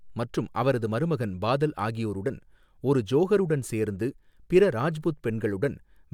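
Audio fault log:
No faults heard in this speech recording.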